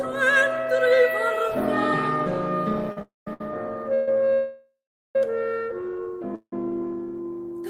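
From 2.90 to 3.41 s the music shows repeated stalls (stutter): four brief holds, the longest 66 ms, where the last sound is drawn out before playback catches up. They fill about a quarter of that half-second. Unlike a single freeze, the effect is a choppy, dragging stumble.

Overlapping it, from 3.02 to 3.27 s, comes a call audio freeze: the music hangs for about 250 ms and fades to silence for 170 ms. Further freezes follow at 3.94 to 4.08 s (130 ms, a held sound with no silence), 4.33 to 5.16 s (815 ms, silent for 410 ms) and 6.35 to 6.53 s (173 ms, 80 ms silent). Each is one longer hang that likely comes from packets held up long enough to empty the jitter buffer. The music then resumes exactly where it stopped, so a gap is inserted and nothing is lost.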